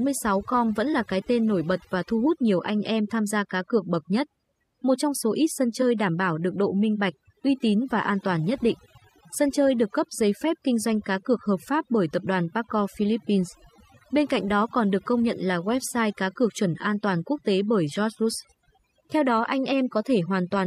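Right from the start and all the way through, this speech has overdone noise removal: the reduction was set so hard that bands near the noise floor get gated out, taking quiet parts of the voice too. The background sits near-silent with little twinkling specks.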